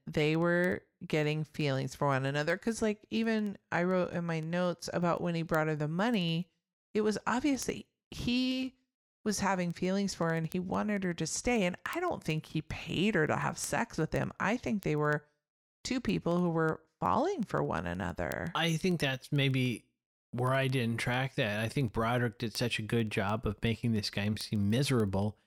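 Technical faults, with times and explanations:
0.12–25.45 s, word clock ticks: sharp ticks of uneven strength recur at a steady rate of about one every 0.07 s, roughly fourteen a second and some three hundred across the speech. The receiving device is running on its own clock rather than locking to the digital link's, and the two disagree by a few hundred parts per million. Each time they slip past each other, a sample is dropped or repeated, and the neighbouring samples are misread, producing a tick.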